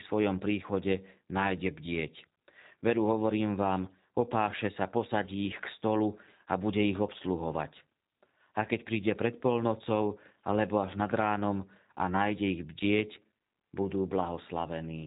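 Speech coded with G.729 throughout, with plainly audible damage. Nothing above 4 kHz survives, and the voice sounds rough and slightly synthetic, as the codec rebuilds it from a filter, pitch predictor and sparse pulses. This fits an 8 kbit/s G.729A stream.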